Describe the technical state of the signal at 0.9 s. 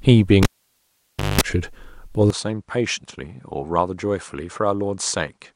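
At 0.9 s the input cable has been pulled out while live, part of a cable pulled and plugged in fault running from 0.43 s to 1.41 s. A pop at 0.43 s marks the break. The signal path is then open for roughly 0.93 s, so the speech drops to near silence. As the plug goes back in, the tip touches first and lets in about 0.2 s of 50 Hz mains buzz, and a second pop brings the sound back.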